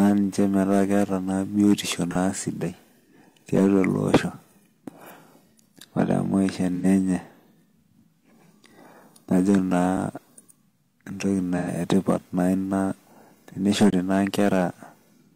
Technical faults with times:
2.11-2.15 AAC frame loss with concealment
6.75-6.86 AAC frame loss with concealment
9.97 block of digital silence
11.57-11.68 AAC frame loss with concealment
13.90-13.93 block of digital silence

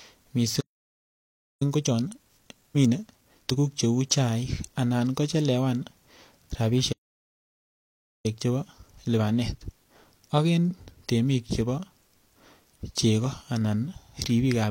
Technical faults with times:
0.60-1.62 playback stall
1.62-3.62 time-compressed catch-up
6.92-8.26 playback stall
8.26-11.26 time-compressed catch-up

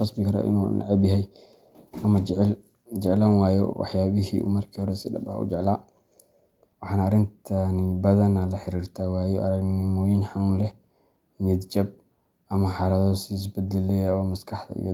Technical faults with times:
0.63-0.65 lost packet rebuilt from error correction
3.27-3.33 lost packet rebuilt from error correction
4.79-4.81 lost packet rebuilt from error correction
5.61 lost packet rebuilt from error correction
9.03 lost packet rebuilt from error correction
10.61-10.71 lost packet rebuilt from error correction

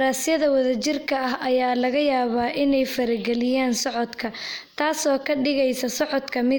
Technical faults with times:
none

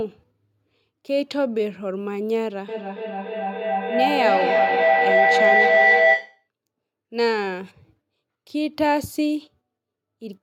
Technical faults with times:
2.68-6.48 feedback echo between two devices

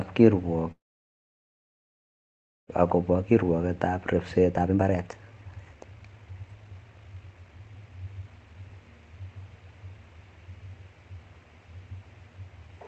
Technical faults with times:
0.71-2.70 call audio freeze
2.92-8.70 jitter buffer speed-up

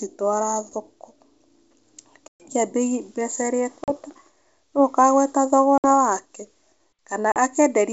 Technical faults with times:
2.28-2.47 packet loss on an ADPCM call
3.84-3.91 packet loss on an ADPCM call
5.78-5.86 packet loss on an ADPCM call
7.32-7.37 packet loss on an ADPCM call

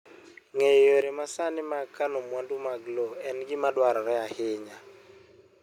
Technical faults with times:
1.02 microphone volume stepped down

